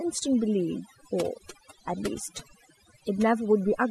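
Overdone noise removal runs throughout: bands near the noise estimate are cut away, leaving a near-silent background with twinkling specks; spectrograms show scattered isolated dots amid gaps.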